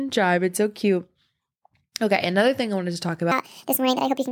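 Speech, and after "I wanted to talk" at 3.32 s, the rest of the clip turns hurried and squeaky, about seven semitones higher. This is a section at the wrong speed, 1.57 times too fast, likely from playback against a mismatched clock.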